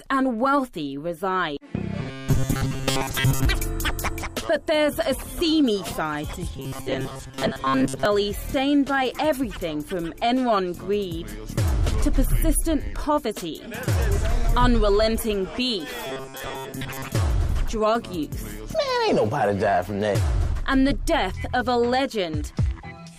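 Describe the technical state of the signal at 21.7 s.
At 21.7 s the signal is intact, with no audible fault at that moment.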